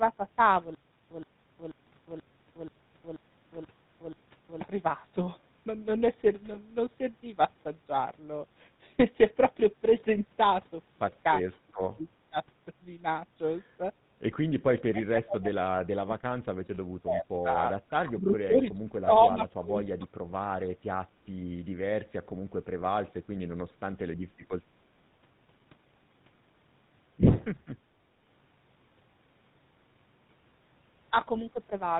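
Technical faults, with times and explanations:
Throughout: GSM full-rate codec. The whole clip is plainly coloured by the codec. It models the vocal tract and drives it with a sparse train of regular pulses, keeping only one excitation sample in three. At 13 kbps this plainly leaves a buzzy, gravelly roughness on the speech. Nothing above 4 kHz gets through, so sibilants and breath sound dull and clipped. The grain sits under every syllable.
6.54 to 6.57 s and 10.00 to 10.03 s: lost GSM frames. At each point one 20 ms frame is missing. The decoder fills the gap by repeating the last good frame's settings. That gives a short rough, metallic ring in place of the real sound. Both losses are brief, so the ring is only a flick before normal decoding resumes.
11.68 to 11.80, 11.96 to 12.06, 12.29 to 12.37, 14.91 to 16.86, 17.03 to 17.25, 17.42 to 20.08, 20.33 to 20.40 and 21.02 to 21.09 s: speech suppressed in double talk. 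The speech dips sharply here, by about 15 to 35 dB. The short events are chopped-out fragments. The long stretches near 15 to 17 s and 17.4 to 20 s hold the voice pushed down for one to two seconds. The likely cause is an echo canceller turning the talker down while the other side spoke.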